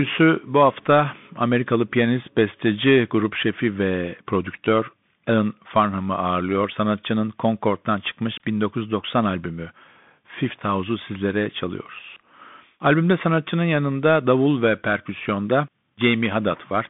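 From the first second to the end, the speech goes through a Bluetooth CVSD headset codec, and the damage is plain to hear. The line sits between roughly 150 Hz and 3.6 kHz, with nothing at all above 3.8 kHz, so it sounds boxy and phone-like. CVSD sends just one up-or-down bit per sample, which fits a 64 kbps stream, so sharp, loud high sounds outrun its adapting step. That shows up as scratchy s sounds over a grainy hiss.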